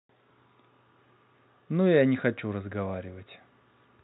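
There are no technical faults to describe at any point in the speech, which is carried over G.711 telephone coding.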